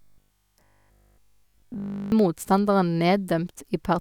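From 0.02 to 2.12 s the speech turns into robotic sound from repeated short buffers: a rigid, metallic buzz pitched at 50 Hz that still roughly tracks the syllables. The likely cause is audio arriving too slowly, so that essentially the whole stretch is built from repeated 20 ms slices while the real audio is skipped. Unlike 50 Hz mains hum, which would sit beneath an intact voice, here the buzz comes from the voice itself.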